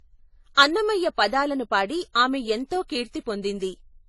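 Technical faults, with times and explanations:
Throughout: transcoding between lossy codecs. The speech was likely encoded twice in succession, with the sound suggesting a low-bitrate MP3 followed by a leaner AAC pass. The second coder re-encodes the first one's artefacts, so smearing and swirl stack together, and nothing remains above 11.4 kHz.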